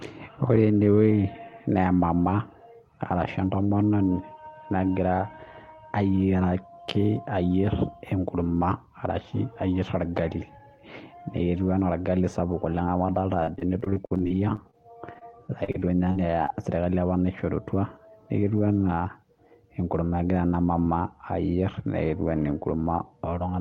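Repeated packet loss (robotic sound) runs from 13.43 to 16.50 s, just after "sapuk oleng' amu adoolta". Over twenty brief dropouts, none longer than 48 ms, are each patched by extending the preceding sound, leaving the speech choppy with fragments missing.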